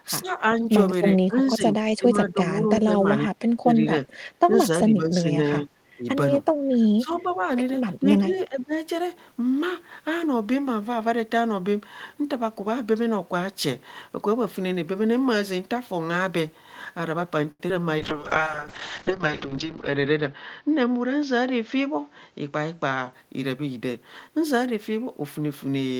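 From 0.05 to 0.68 s the speech dips by up to about 10 dB across roughly 150 ms, a pattern of speech suppressed in double talk. The likely cause is an echo canceller that, with both ends talking at once, could not tell the near talker from loudspeaker echo and attenuated both. The same suppression returns from 1.27 to 6.08 s, the heaviest case, with drops near 20 dB spread over about two seconds in total. The level sags, the top end thins and parts cut out in fragments. It appears again from 6.67 to 7.44 s (about 15 dB, roughly half a second affected) and from 8.00 to 8.74 s (about 15 dB, around 300 ms).

Inside those later dips, two short echo leaks come through. From 7.11 to 7.22 s a faint delayed copy of the speech sits about 25 dB below the direct signal. From 8.35 to 8.41 s a fainter one sits near 35 dB down. Both trail the original by 392 ms. Their likely source is a loudspeaker on one side of the call whose echo canceller left residual pickup that was sent back.

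From 17.51 to 17.61 s there is a short stall from a late packet. The jitter buffer ran dry, and the receiver held the last sound for 81 ms until the packet arrived, then resumed from the same point. Nothing is lost, but the sound is held unnaturally long, and playout delay grows by 81 ms.

At 17.69 s comes a short concealed packet loss. About 20 ms of audio never arrived. The decoder covered the gap by extending the preceding signal and blending back in, so the result is a brief smear or wobble rather than a clean gap.

From 17.99 to 23.19 s a call bitrate drop takes the encoder from 32 to 10 kbps, and audio bandwidth narrows from 20 kHz to 8 kHz. The low point lasts about 1.9 s. The speech turns muffled and somewhat rough and watery, losing its sibilance and air until the rate recovers.

Overlapping this, from 19.57 to 20.62 s, a jitter buffer speed-up plays the audio at about 106 % of normal speed to shed excess buffered delay. 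It removes roughly 70 ms in small pitch-period slices. The pitch holds, but the speech sounds slightly hurried.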